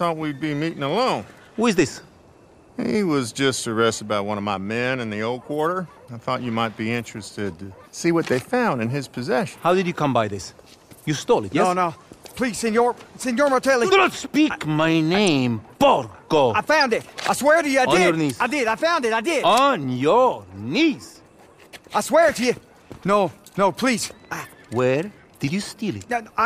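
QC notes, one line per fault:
15.27 s, corrupt frame decoded: a single brief chirp or burst of noise, peaking at about -15 dBFS, where one damaged frame put energy at the wrong frequencies. It lasts about one frame rather than being a dropout's gap or a click's single spike.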